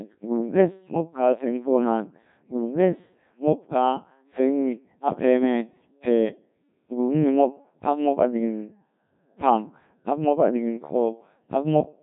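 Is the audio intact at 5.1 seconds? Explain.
No. At 5.1 seconds, as throughout the clip, the speech sounds robotic and buzzy, with heavy damage. This is the Codec 2 vocoder, which discards the waveform and rebuilds the voice from sine waves using only pitch, voicing, energy and spectral envelope. It runs at roughly 1.3 kbit/s.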